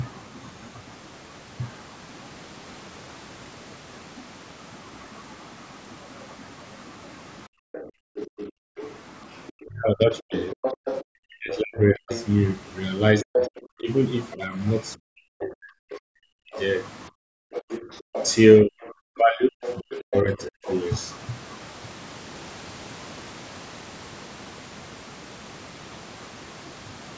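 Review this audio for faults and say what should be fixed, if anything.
Background gated by the echo canceller appears at 7.47–8.76 s and again at 17.10–17.34 s. The room tone sinks by about 40 dB, for roughly 0.7 s in total in the first stretch and 0.2 s in the second, and then returns. The canceller clamps the microphone while the loudspeaker plays. Unlike a network dropout, only the ambience vanishes, and its timing follows the far-end playback.

The other side's voice leaking through is heard at 7.74–12.26 s, 13.34–14.35 s and 16.52–20.74 s. In the first and last stretches it sits around 15 dB under the talker. At 13.34–14.35 s it comes close to the talker's level. The likely cause is loudspeaker output reaching the microphone that the canceller failed to subtract. It differs from crosstalk between lines because it arrives in the stretches where the canceller is working hardest.

Speech suppressed in double talk occurs at 9.61–12.11 s, 13.23–16.53 s and 17.62–20.62 s. 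In each span the talker's voice dips by roughly 40 dB or breaks up for around 1.5 s in total. This is likely the canceller turning everything down because it cannot separate the talker from the echo while both sides speak. Unlike the gating, it strikes the voice itself, and only during overlap.

To prevent these faults, use a headset or better acoustic isolation, and tune the echo canceller's double-talk detection so that it suppresses less aggressively.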